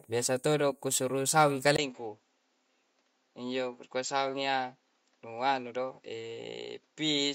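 At 1.76 s a 20 ms gap, then a duller, quieter sound, with nothing above 7.6 kHz and faint new hiss, points likely to an input switched to a poorer device, not mere filtering.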